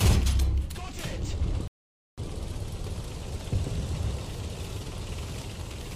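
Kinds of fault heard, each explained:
Rebuffering stall: the player drained its store of downloaded audio before the next chunk arrived, so playback halted and waited instead of skipping ahead. At 1.68 s the sound drops abruptly into silence, and at 2.18 s it picks up again from precisely the point where it stopped. No material is missing across the gap; the pause simply inserts about half a second of dead air, stretching the clip's running time by roughly 0.5 s.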